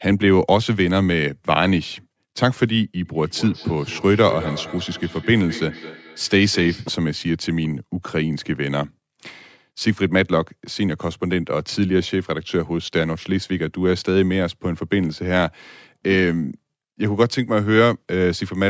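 From 3.05 to 7.01 s, feedback echo between two devices: speech returns roughly every fifth of a second, about 15 dB down, thinning and ringing.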